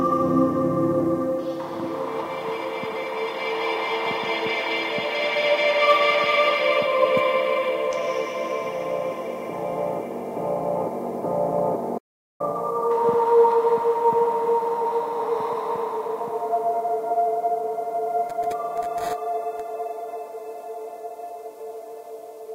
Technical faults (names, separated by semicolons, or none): playback stall